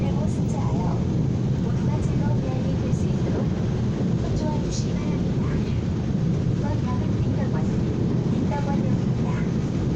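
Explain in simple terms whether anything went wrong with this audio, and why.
Listening through it, nothing in the audio stood out as having gone wrong.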